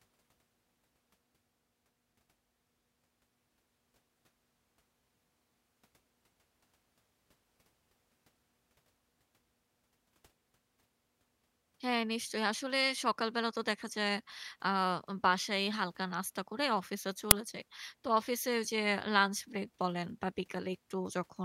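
At 17.31 s the speech is interrupted by an uninitialised buffer: a 10 ms block was sent to the output before any audio had been written into it, so stale memory contents were played as samples, producing a brief, loud crack.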